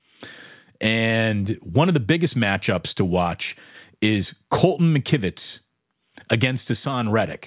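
Nothing in this recording stood out as a technical problem on listening.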